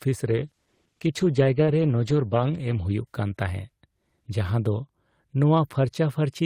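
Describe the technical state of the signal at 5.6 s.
At 5.6 s the speech signal is intact, with no dropout, clipping, glitch or other technical fault audible at that point.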